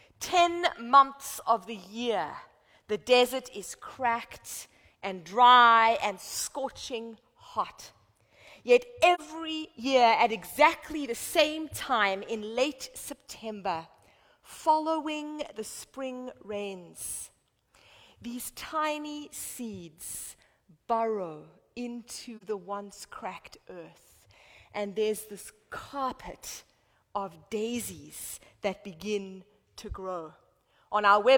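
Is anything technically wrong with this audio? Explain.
Yes. There is AAC frame loss with muting at 9.14–9.20 s and 22.37–22.43 s. Each gap suggests one missing frame of about 43 ms whose spectrum the decoder zeroed. Overlapping windows taper the sound out and back in, leaving a brief soft-edged hole. On a spectrogram this shows as a narrow blank vertical band, and on a waveform as a tapered dip to silence.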